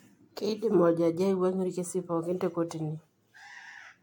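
Generation loss runs through the whole speech clip. It sounds swirly, smeared and hollow, and attacks blur. Nothing remains above 18.6 kHz. The likely cause is lossy AAC-style coding repeated about four times, each pass quantising anew on a shifted frame grid.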